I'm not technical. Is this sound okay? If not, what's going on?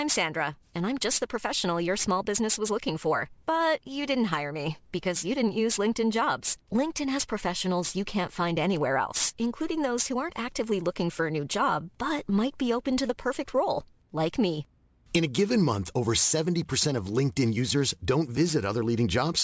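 No. Throughout, the speech has aliasing: s and sh sounds come out gritty and metallic. When the audio's quality was lowered, sounds above about 8 kHz weren't removed first, so they folded back as false tones. A careful reduction would only sound muffled. This sounds harsh instead.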